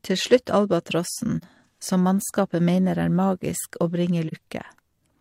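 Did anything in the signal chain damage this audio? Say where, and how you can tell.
Yes. AAC frame loss with muting in the codec: soft-edged dropouts at 1.38–1.44 s and 4.28–4.33 s, each one roughly 43 ms frame zeroed and faded by overlapping windows.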